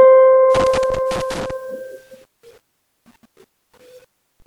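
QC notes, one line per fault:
0.55–1.51 s, loose connector crackle: a worn or dirty contact in the music's signal path is making and breaking as it shifts, chopping the audio on and off, heard as an irregular scratchy burst lasting about a second.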